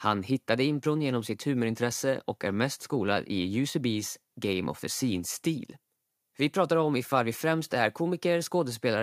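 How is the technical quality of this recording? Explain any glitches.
No technical glitches are audible anywhere in the recording.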